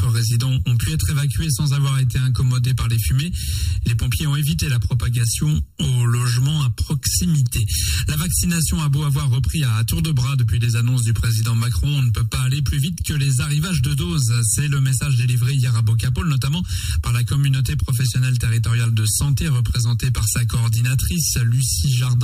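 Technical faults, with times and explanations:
Throughout, channel delay (comb filtering): one side runs about 0.7 ms late before the mono sum, carving fixed notches from around 700 Hz upward, so everything sounds hollow and phasey.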